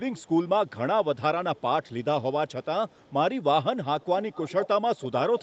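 A faint, delayed copy of the speech trails behind it at 0.15, 0.48, 1.56, 1.83, 2.48 and 2.89 s. It arrives about 355 ms late. At 4.0 to 4.68 s and again at 4.96 s, the copy comes back about 408 ms late and clearly louder. This is echo leak. The likely cause is a loudspeaker on the far side of the call whose echo canceller let part of its microphone pickup through.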